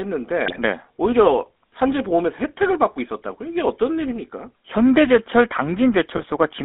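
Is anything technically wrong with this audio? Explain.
Yes. The speech has passed through the GSM full-rate codec for its whole length, and GSM bit errors break it twice.

The full-rate codec models the vocal tract and drives it with a coarse, regularly spaced pulse excitation. That leaves the speech plainly buzzy and gravelly, which fits a bitrate of about 13 kbps. The line band runs from 250 Hz to 3.6 kHz. On a spectrogram, energy stops at a hard ceiling near 3.6 kHz and the low end is thin.

GSM bit errors strike from 0.46 to 0.59 s and again from 6.14 to 6.25 s. Corrupted filter, pitch and gain values reach the decoder, so the sound squawks, pops and gargles for a few frames. The waveform shows sudden level spikes there, and the spectrogram shows smeared, misshapen bands.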